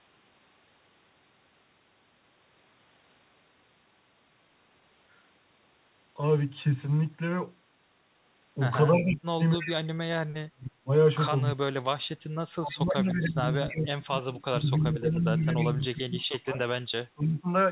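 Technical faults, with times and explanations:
8.95–9.72 s and 12.7–15.21 s: echo leak. A faint delayed copy of the speech trails it by about 308 ms, roughly 15 dB down in the first stretch and 20 dB down in the second. Likely a far-end loudspeaker echo that the echo canceller failed to fully remove.
8.98–10.91 s, 11.53–12.05 s and 12.6–17.49 s: speech suppressed in double talk. The speech sinks sharply in level, by around 40 dB at worst in the first two spans and around 30 dB in the last. Likely the echo canceller mistook overlapping talk for echo and attenuated everything.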